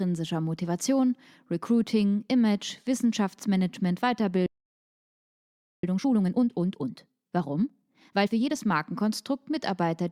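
At 4.46 s the speech cuts out mid-flow and the line stays silent for about 1.37 s, resuming at 5.84 s. This is a playback stall, likely the player running short of data or its output thread being blocked until it could recover.

From 5.84 s to 8.56 s the speech sounds rushed, running at about 1.5 times normal speed while keeping its normal pitch. This time-compressed catch-up comes from the player trimming and cross-fading small slices to clear the backlog the stall left behind.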